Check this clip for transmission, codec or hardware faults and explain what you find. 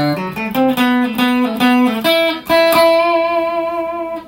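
Nothing in the audio points to a transmission, codec or hardware fault.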